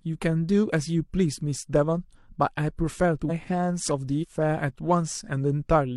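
Compressed frames were skipped twice in this speech clip, either missing from the stream or rejected by the decoder as damaged, so playback jumps ahead. At 3.25 s roughly 0.4 s of audio vanishes, and at 4.18 s about 0.15 s more, amounts that fit a frame length near 46 ms. At each join the speech is abruptly further along.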